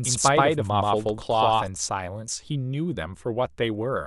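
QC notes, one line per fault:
0.00–1.68 s, doubled audio track: the speech is already heard twice when the clip opens, with a second full-band copy trailing the first by around 150 ms at roughly the same loudness. This gives a hard, slapback-like smear with no decay or room colour. The copy cuts out abruptly at 1.68 s. The likely cause is the same signal being captured a second time through a slower path, or an edit holding two copies out of step.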